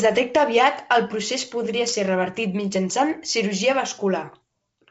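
Bit errors on an ADPCM link strike twice in this speech: a short pop at 1.66 s, between "detecta aviat el procés" and "ser revertit mitjançant cirurgia", and a rougher burst from 4.33 to 4.37 s, after "ser revertit mitjançant cirurgia". A very low error rate, around a tenth of a percent, flips bits in the G.722 stream. Each flip knocks the decoder's step size and predictor off track, so the damage rings briefly as a crackle with a momentary change in level.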